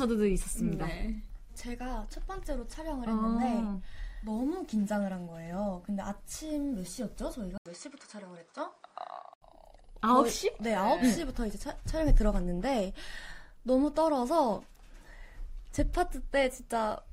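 At 7.58 s the input likely switched to a poorer device, leaving an 80 ms gap before the sound resumes with nothing above 9.6 kHz, a duller tone and a faint new noise floor at unchanged loudness; full bandwidth returns at 9.42 s.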